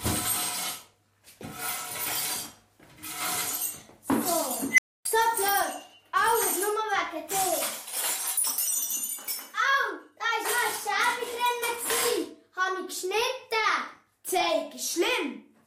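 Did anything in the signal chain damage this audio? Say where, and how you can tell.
Yes. An unstable filter in the processing stage damages the audio from 4.71 to 5.05 s. A tone of around 2 kHz swells from nothing to clipping in about 70 ms. Then the output drops out for about 270 ms. A recursive filter with bad coefficients has poles outside the stable region, so each pass feeds back more energy than it loses. The output grows until the arithmetic overflows. The stage then goes silent until its state resets.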